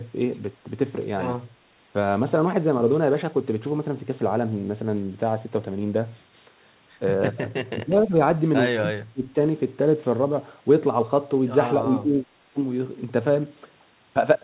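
The voice sinks and thins from 7.73 to 8.19 s, more deeply from 8.81 to 9.35 s, and briefly at 12.02 to 12.13 s. This is likely speech suppressed in double talk: an echo canceller unable to separate the talker from overlapping far-end echo and ducking both.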